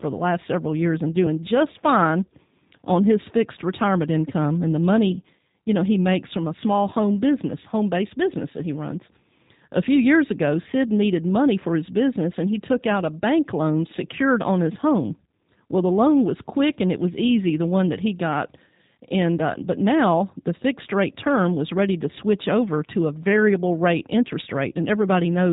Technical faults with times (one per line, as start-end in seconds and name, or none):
0.00-25.52 G.729 codec